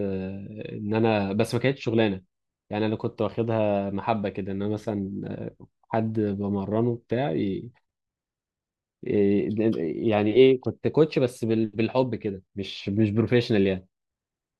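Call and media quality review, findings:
Speech signal shows no audible technical faults at any point, so there is nothing to log against any component for this clip.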